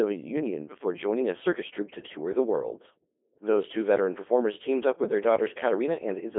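Codec 2 vocoder damage runs through the whole clip, from start to finish. Instead of carrying the waveform, the link sent only pitch, voicing, energy and a coarse spectral envelope, and the decoder rebuilt the speech from summed sine waves. The result is heavily robotic and buzzy, squeezed into a narrow band of roughly 250 Hz to 3.5 kHz with nothing above 3.7 kHz, which fits a low-rate mode around 2.4 kbit/s.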